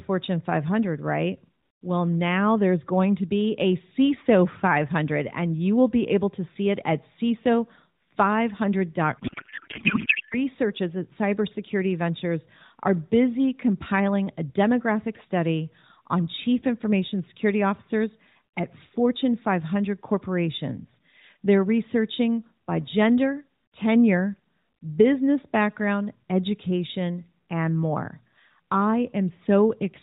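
At 9.18 s a codec payload misread begins and runs to 10.37 s, about 1.2 seconds. The speech gives way to garbled noise and warble that barely tracks it. The decoder is unpacking frames with the bits in the wrong places. That fits octet-aligned AMR frames being read as bandwidth-efficient ones. Around it, the AMR narrowband mobile codec stays band-limited below 4 kHz, with the light buzz that points to 12.2 kbps.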